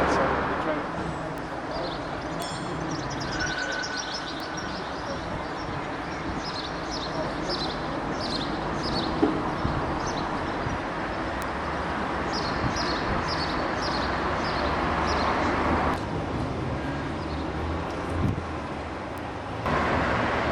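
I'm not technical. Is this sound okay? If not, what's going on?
No. There are five tiny, sharp ticks at 1.38, 2.42, 4.40, 11.42 and 19.18 seconds. Each is a bit error spike: one digital value in the recording briefly became wrong and snapped straight back, affecting only one or two samples. Unlike vinyl-style crackle or a dropout where sound goes missing, each tick is a single isolated point. The surrounding sound carries on unbroken, and the ticks don't follow what's playing.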